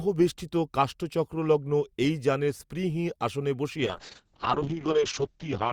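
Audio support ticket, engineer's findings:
Speech turns rough and watery, top end gone, from 3.87 s to end of clip. Call bitrate drop: bandwidth estimate fell, Opus encoder cut from 64 to 7 kbps for about 1.86 s. Coarse coding at low rate; audio bandwidth narrowed from 20 kHz to 8 kHz, hence muffled sound.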